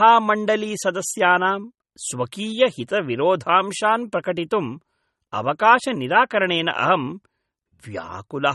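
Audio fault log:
Throughout: likely MP3 compression. Nothing is heard above 11.8 kHz, where the encoder cut the treble. The damage is plainly audible. The speech sounds watery and swirly as weak frequency lines flicker on and off between frames. This fits a bitrate near 32 kbps.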